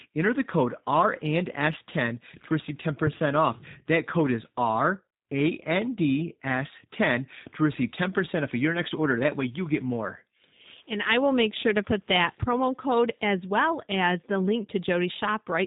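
From start to finish the speech carries G.729 codec damage. The codec rebuilds each 10 ms frame from a vocal tract model, a pitch predictor and a few pulses, which fits an 8 kbit/s VoIP link. Nothing above 4 kHz survives, and voices come out rough and faintly synthetic. Plain band-limiting would sound dull but clean, without that roughness.

From 11.10 to 11.39 s, just before "sure to put", hard clipping appears. The level runs about 2 dB past what a stage can pass, so the peaks are sliced flat and add high harmonics. It is heard as brief crackle on the loudest moments, not the fuzz of heavy overload or the smooth thickening of soft saturation.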